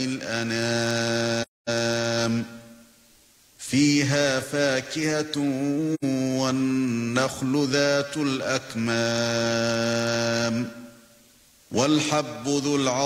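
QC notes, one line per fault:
1.42–1.70 s, AAC frame loss with muting: the sound fades down into a silent gap of about 256 ms and fades back up with soft edges. This fits six lost frames of roughly 43 ms each. The decoder zeroed their spectrum, and the overlapping windows smooth the entry and exit.
5.94–6.04 s, AAC frame loss with muting: a shorter soft-edged dropout of about 85 ms, consistent with two missing frames. With their spectral content set to zero, the overlap-add of neighbouring windows tapers the sound out and back in over about a frame on each side.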